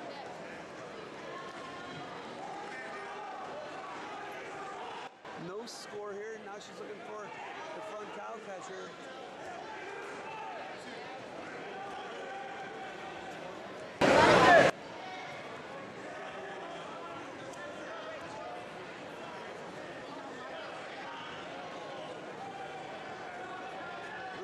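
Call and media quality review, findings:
Sudden gain jumps: level and noise floor drop about 12 dB at 5.07–5.25 s, jump about 22 dB at 14.01–14.70 s. Likely an unramped digital gain step.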